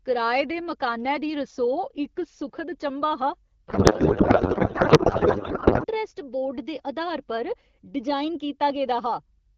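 From 3.68 to 5.85 s the speech collapses into garbled noise and warble that barely tracks it: a codec payload misread. This fits octet-aligned AMR-WB frames being unpacked as bandwidth-efficient, so the decoder reads fields from the wrong bit positions.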